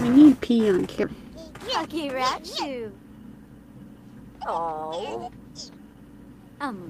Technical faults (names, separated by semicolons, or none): skip ahead; jitter buffer speed-up